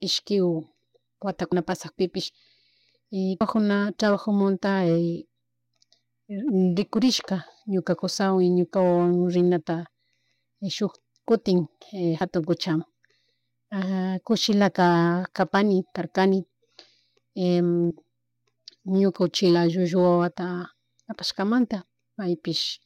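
At 1.52, 3.41, 12.21 and 17.9 s the speech jumps forward as compressed frames are skipped: the decoder never plays those frames, so roughly 70, 150, 70 and 30 ms of audio simply vanish, jump sizes that fit a 32 ms frame. A waveform shows an abrupt change in envelope with no gap, and a spectrogram shows harmonics that break off and resume mid-contour.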